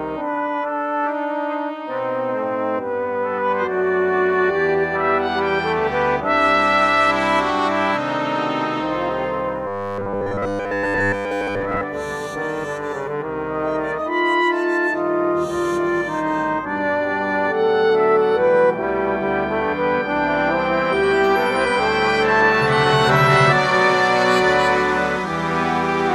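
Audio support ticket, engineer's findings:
Rigid metallic buzz at 100 Hz, 9.67–11.83 s, sound only loosely followed. Robotic sound from repeated short buffers, likely input starvation in playback buffer: last ~10 ms looped to fill gaps, most real audio skipped.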